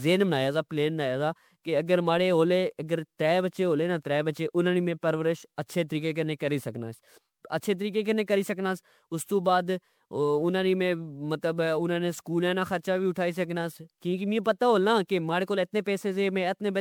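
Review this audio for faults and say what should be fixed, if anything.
Generation loss runs through the whole speech clip. The sound is swirly and hollow, with smeared consonant attacks and a watery shimmer across the upper range. That is likely the result of about seven rounds of lossy decoding and re-encoding, which fits an MP3 chain near 128 kbit/s. Each pass quantised on a shifted frame grid, so the noise and spectral holes stacked up. A single low-bitrate encode would sound thin but steadier, not this cumulatively degraded. To prevent it, keep a lossless master and encode to MP3 only once, at the final export.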